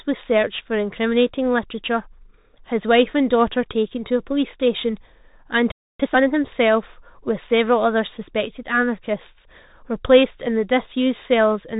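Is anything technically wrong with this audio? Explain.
Yes. Three faults are audible.

Throughout, the speech carries the sound of the Bluetooth CVSD headset codec. Nothing above about 3.8 kHz survives, so the voice is thin and boxy. The codec sends one bit per sample, saying only up or down, with an adapting step size. This fits a 64 kbit/s stream. Loud high sounds outrun the step and distort. S sounds turn scratchy, and a granular hiss sits under the speech. The damage is plainly audible.

From 5.72 to 6.00 s there is a playback stall. The speech stops mid-flow and the output goes silent for about 280 ms. The likely cause is that the player ran out of data, or its thread was blocked, until it recovered. The gap is long enough to hear as a clear break in the flow of the speech.

From 6.00 to 6.28 s comes time-compressed catch-up. The player clears the backlog left by the stall by cutting out small pieces and cross-fading the rest together. 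Here it plays at twice normal speed for about 280 ms. The speech sounds hurried, but the pitch stays normal. Normal pacing then returns.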